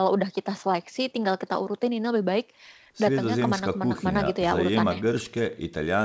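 Listening to this speech recording, nothing stood out as a technical problem, and the sound reaches up to about 8 kHz as expected for a wideband call path.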